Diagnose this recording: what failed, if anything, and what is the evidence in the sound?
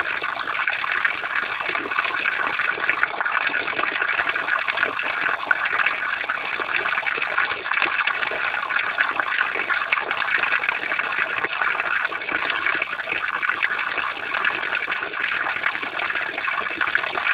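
A faint buzzing chirp runs through the whole recording, pulsing at around 70 Hz and sitting roughly 30 dB below the sound, rising and falling independently of it. This is computer activity noise in the analogue wiring: processor, graphics or mouse load currents disturb the shared ground.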